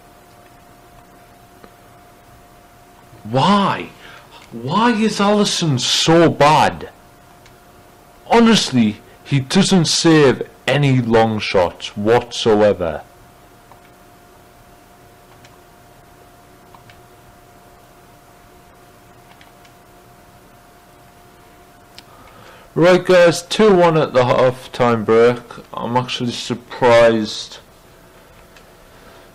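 For the first 2 s the sound is dull and smeared, then clears abruptly with no gap. That is an adaptive stream starting at a low bitrate, moving from a low-rate Opus version, likely near 24 kbit/s, to one nearer 64 kbit/s. A dropout or buffering fault would leave a pause at the change.

Throughout the clip there is hard clipping, from a signal driven about 15 dB beyond what a stage could pass, with roughly one sample in twenty flattened. The result is a harsh fuzz on every loud passage, not crackle on occasional peaks, and it never fades the way a codec problem would.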